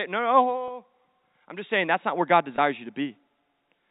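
At 0.68 to 0.70 s and again at 2.56 to 2.58 s the speech briefly holds and buzzes, as if one instant were stretched. This is packet loss with pitch repetition. Each gap lasts about 20 ms, which fits a single lost packet. The receiver filled it by looping the last pitch period, so the sound stays voiced but turns slightly mechanical. The band stays within the 4 kHz limit of the G.711 telephone coding.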